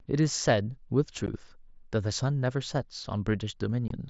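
Unconcealed Bluetooth headset packet loss occurs at 1.26 s and again from 3.88 to 3.91 s. Voice packets travelling between headset and phone over the mSBC wideband link never arrived, and nothing was done to fill the gaps, so the speech drops straight to silence or an idle pattern. The holes last about 15 ms and 22.5 ms, consistent with two and three lost 7.5 ms packets. Their hard edges make each one a brief, abrupt dropout.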